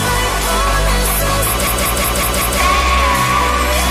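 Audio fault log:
1.67 to 2.60 s, system hang loop: the same 186 ms chunk of audio repeats exactly five times, giving a choppy machine-gun stutter at about 5.4 Hz. What's happening is the system froze while the sound hardware kept replaying whatever sat in its ring buffer. That loop length fits an 8192-sample buffer, and because it's fairly long you hear a stutter rather than a buzz. Essentially no audio goes missing around the freeze.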